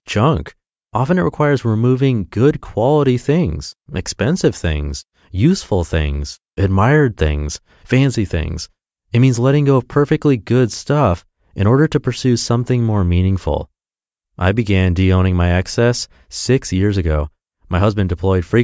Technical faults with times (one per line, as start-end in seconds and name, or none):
none